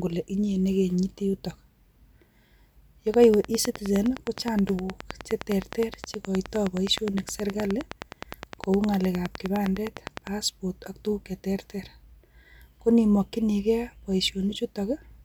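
From 3.14 to 10.28 s a train of clicks ticks steadily at 9.7 per second, about seventy similar pops well above the speech and through pauses, likely interference rather than random crackle.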